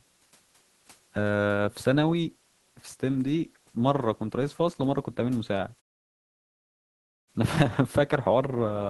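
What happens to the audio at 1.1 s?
Nothing goes wrong at 1.1 s; the audio is intact there, with only the room's own background noise sitting about 39 dB beneath the speech.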